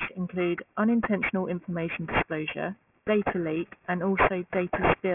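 Aliasing runs through the whole speech clip. The audio was resampled down without an anti-aliasing filter first. Everything above the 3 kHz folding point mirrors back below it, which fits a drop from a 48 kHz source to a 6 kHz sample rate. The folded energy sits at roughly the same level as the speech itself, so sibilants come out gritty and metallic, carrying false tones unrelated to the voice, and the spectrum stays dense right up to the 3 kHz edge.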